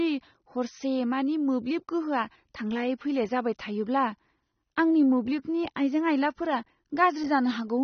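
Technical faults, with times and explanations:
Throughout, AAC compression. Nothing is heard above 6.3 kHz, so the speech sounds dull and smeared. Sibilants take on a warbling, fizzy texture. The likely cause is AAC-LC coding at a low bitrate, which fits about 24 kbps.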